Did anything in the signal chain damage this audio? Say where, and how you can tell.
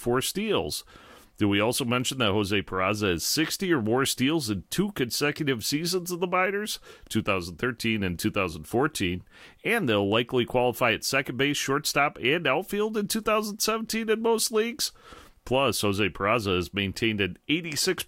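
No, nothing in the signal chain audibly damaged this speech recording; the signal stays continuous and stable throughout, with no disturbance traceable to any stage between capture and playback.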